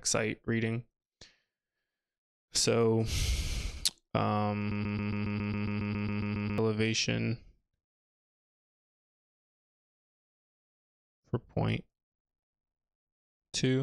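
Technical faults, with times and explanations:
4.71–6.58 s, broken-record loop: a 137 ms fragment repeats 14 times back to back, likely a stalled stream resending its last piece, replacing the intended audio.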